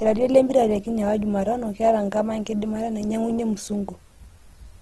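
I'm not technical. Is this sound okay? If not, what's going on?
No. The speech has been squeezed hard to save space, most likely by Opus compression. You can hear it from start to finish. Voices sound rough and grainy rather than smooth. The crisp top end is missing, since nothing above about 12.2 kHz survives. When the encoder runs short of detail, it fills gaps with borrowed or noisy sound instead of leaving them empty. That is why the speech sounds fizzy and coarse, not just dull.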